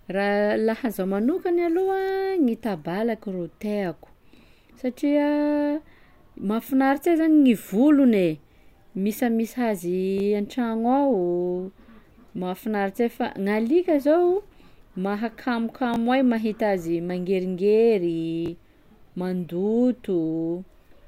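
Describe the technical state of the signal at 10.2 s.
A repeated buffer occurs from 10.18 to 10.2 s: fresh audio arrived late, so the last block played twice, which fits a 20 ms buffer. About 20 ms of speech is lost, heard as a brief click-like stutter at the hard join.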